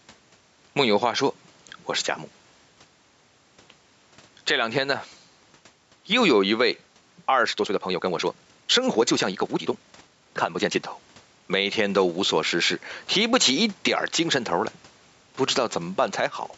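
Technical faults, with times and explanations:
Throughout, gain pumping: the level is pulled down whenever the speech gets loud, a swing of about 5 dB. Loud and quiet syllables sit unnaturally close in level, giving a squashed, flattened delivery. The likely cause is input gain set far too high, with a fast limiter or compressor clamping each loud peak and releasing again in the gaps.
7.40 to 10.84 s, time-stretched section: the speech abruptly rushes forward at roughly 1.55 times its normal pace while the pitch stays exactly where it was, before snapping back to normal pace at 10.84 s. This is likely what you get when software squeezes a stretch of audio into less time, throwing away short slices to speed it up without raising the pitch.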